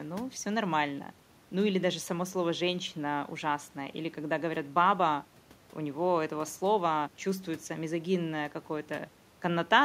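No technical faults can be heard anywhere in the speech recording.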